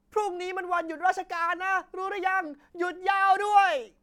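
Nothing stood out on listening to this speech recording.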